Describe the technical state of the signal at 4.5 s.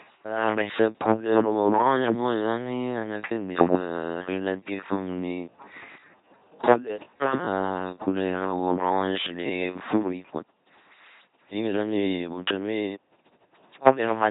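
LPC-10 vocoder coding runs through the whole clip: every instant is forced fully voiced or unvoiced, so speech at 4.5 s buzzes robotically, consistent with a 2.4 kbit/s coder. A time-stretched section spans 0.0 to 10.0 s, with speech slowed to about 0.7 times its pace at unchanged pitch, so it drags, likely from software repeating short pieces to lengthen it.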